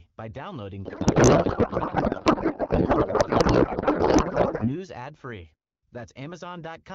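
Right after "by downloading", from 0.85 s to 4.76 s, a codec payload misread turns the speech into garbled noise and warble that barely tracks it. This fits AMR-WB frames packed octet-aligned but read as bandwidth-efficient. Unlike packet loss, this garble runs unbroken until "ad free".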